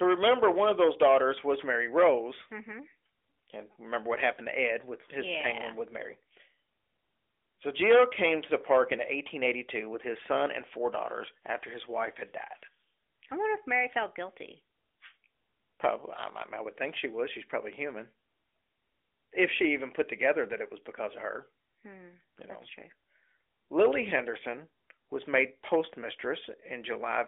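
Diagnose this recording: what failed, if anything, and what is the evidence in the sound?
Nothing failed; no fault is audible anywhere in this recording.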